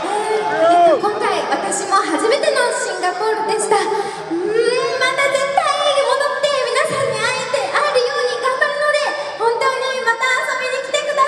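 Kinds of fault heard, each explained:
Nothing stood out on listening; no technical fault could be heard anywhere in the audio.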